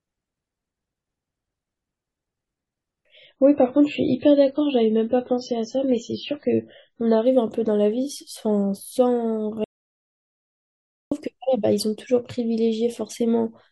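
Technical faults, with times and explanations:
3.25–7.25 s, adaptive stream at a lower bitrate: treble vanishes above 7.6 kHz and sound turns swirly, as the stream switched abruptly to a far lower-bitrate MP3 version.
9.64–11.11 s, audio dropout to silence: sound cuts to dead digital silence for about 1.47 s, with no room tone, likely from lost input while silence was recorded.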